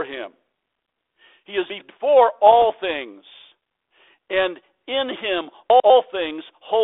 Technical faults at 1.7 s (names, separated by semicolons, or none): chunks out of order